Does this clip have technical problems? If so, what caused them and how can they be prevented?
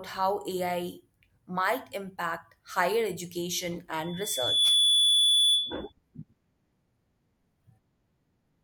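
Yes. A loudspeaker feedback squeal at 3.4 kHz swells over under a second from 4.03 to 5.92 s, after "might impact higher education," rising about 10 dB above the speech. The microphone was picking up its own loudspeaker, and at that frequency the loop gain exceeded one. To prevent it, keep the microphone away from and behind the loudspeakers, lower the gain, or notch out 3.4 kHz.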